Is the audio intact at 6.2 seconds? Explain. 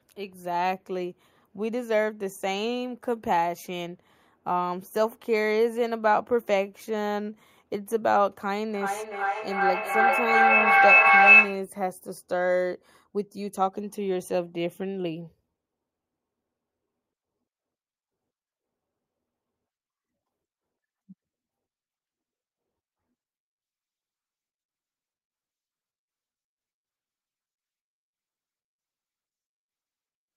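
Yes, the speech at 6.2 seconds is intact, with no dropout, click, distortion or other fault audible at that moment.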